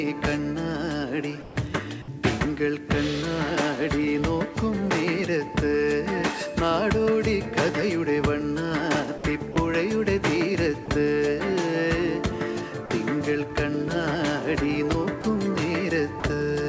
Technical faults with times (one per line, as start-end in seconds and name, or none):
1.42-1.56 sound dropped by the voice detector
2.02-2.08 sound dropped by the voice detector
9.18-9.24 sound dropped by the voice detector
9.52-9.56 sound dropped by the voice detector
10.86-10.88 sound dropped by the voice detector
12.86-12.90 sound dropped by the voice detector
15.22 sound dropped by the voice detector
16.20-16.24 sound dropped by the voice detector